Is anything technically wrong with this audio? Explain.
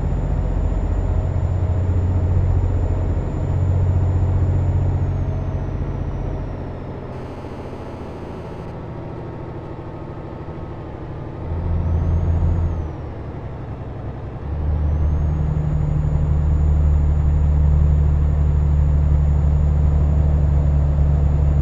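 Yes. There is GSM phone buzz from 7.13 to 8.66 s. A nearby 2G phone in a call sends radio bursts the audio circuit rectifies. It sounds like a steady, raspy 217 Hz buzz with many harmonics, about 26 dB below the signal.

GSM signalling bursts follow from 8.68 to 9.94 s. The phone's user is silent, so it transmits only short burst groups. These give even ticks, with a longer 217 Hz buzz twice a second, around 30 dB down.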